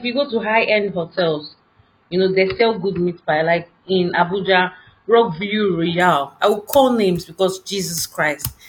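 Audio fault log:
0.0–6.0 s, adaptive stream starting at a low bitrate: the player opens on a thin version with nothing above 5.2 kHz, then steps up cleanly before "I will call names".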